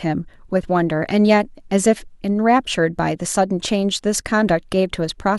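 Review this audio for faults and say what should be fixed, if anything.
No faults; nothing to fix.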